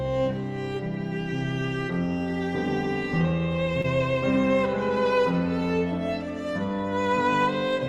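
A brief smear or wobble passes through the sound from 3.81 to 3.86 s. This is short concealed packet loss: about 20 ms of audio arrived too late to decode, so the receiver extended the preceding sound for about 24 ms and then blended back into the real signal.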